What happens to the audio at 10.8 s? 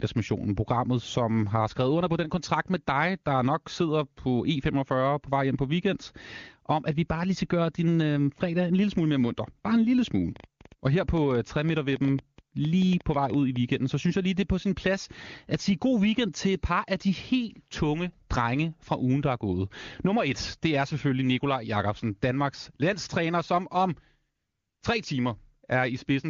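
A train of clicks runs from 10.36 to 13.57 s, between "en lille smule" and "så synes jeg lige": about 30 uneven pops, peaking roughly 5 dB over the speech, likely from nearby interference.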